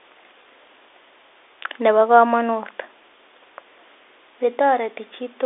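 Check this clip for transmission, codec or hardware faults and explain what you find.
No transmission, codec or hardware faults stand out: the speech carries the ordinary character of G.711 telephone coding, confined to a line band of roughly 300 Hz to 3.6 kHz with nothing above 3.8 kHz, and any quantisation noise from the coding is at most faint.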